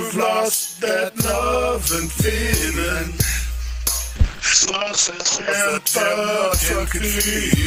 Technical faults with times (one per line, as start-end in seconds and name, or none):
4.18-5.57 call bitrate drop